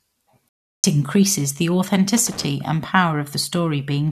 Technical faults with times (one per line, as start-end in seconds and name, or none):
0.49-0.84 stream reconnect
2.17-2.44 loose connector crackle